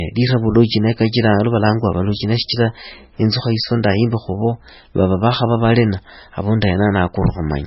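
Throughout the speech, the audio was likely squeezed through heavy MP3 compression at a very low bitrate, around 16 kbps. Everything above 5.6 kHz is gone, dulling s sounds, while weak frequency components flicker between frames, giving a watery, swirling texture and smeared consonant attacks.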